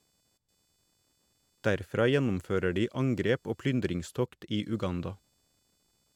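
Speech runs with computer activity noise throughout: a faint chirping buzz, roughly 45 dB below the voice, whose pulses repeat at around 500 Hz. It comes from processor or peripheral load disturbing the shared audio ground. A spectrogram shows a comb of harmonics independent of the speech.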